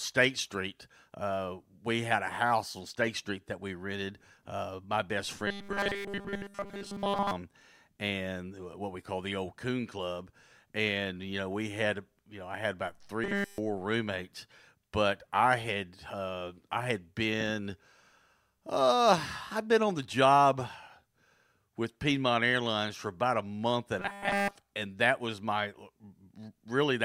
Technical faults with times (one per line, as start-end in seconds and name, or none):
5.47-7.32 robotic sound from repeated short buffers
13.24-13.58 robotic sound from repeated short buffers
23.99-24.55 robotic sound from repeated short buffers